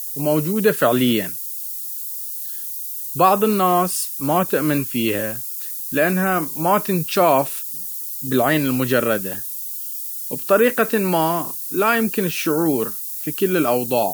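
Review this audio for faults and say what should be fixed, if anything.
There's a steady, thin hiss under the speech for the whole clip, and it leans hard toward the top of the band. That's low bit depth with noise shaping: the audio has been cut to 6 bits, and the rounding error is fed back so the noise gets pushed up into the highs rather than spread evenly. The noise sits only around 10 dB below the speech, so it's very audible. To fix it, keep the signal at 16 or 24 bits all the way through and only reduce word length once, at final export, if you must.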